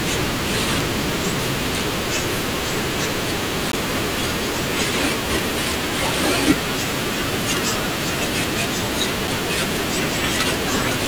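A speech recording with two CD skips, the first at about 3.72 s and the second at about 9.28 s. Each is a brief tick with a very short mute, around 15 ms at the first and only a few milliseconds at the second, after which the speech resumes from a different point on the disc's spiral. The laser has jumped a track. Unlike a dropout or a digital glitch, the sound is not just interrupted. It lurches forward or back by a whole disc turn.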